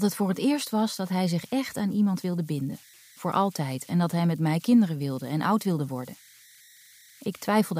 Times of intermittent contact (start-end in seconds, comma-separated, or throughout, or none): none